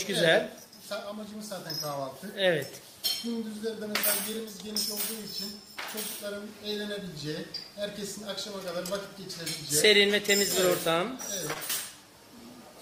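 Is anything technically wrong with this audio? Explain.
Yes. Short concealed packet loss at 11.53 to 11.57 s: about 20 ms of audio failed to arrive in time, so the decoder extended the preceding sound to cover the gap before blending back. It comes across as a brief smear or wobble.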